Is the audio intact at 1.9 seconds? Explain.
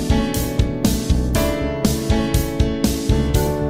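No, at 1.9 s the sound is rougher and less detailed, within a call bitrate drop from 0.37 to 3.13 s, where the encoder fell from 64 to 28 kbps.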